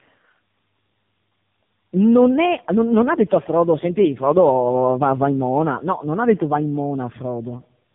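Throughout, tandem speech coding: three speech codecs in series, consistent with CVSD, G.723.1 and AMR-NB, leave the speech rough, warbly and muffled, with nothing above 3.6 kHz.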